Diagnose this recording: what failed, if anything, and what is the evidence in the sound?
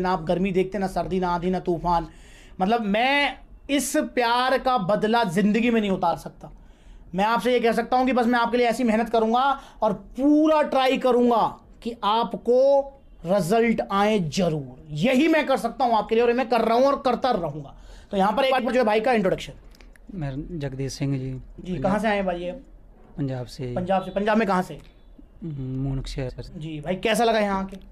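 Frame ordering broke, a network-stage fault. You hear frames out of order at 1.03–1.11, 6.02–6.14, 18.51–18.68, 21.58–21.65 and 26.29–26.48 s: two neighbouring runs of frames swapped, so each short stretch plays halves-reversed as a garbled flutter, with no time lost.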